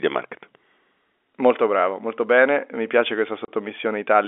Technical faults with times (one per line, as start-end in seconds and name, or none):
3.45-3.48 packet loss filled with silence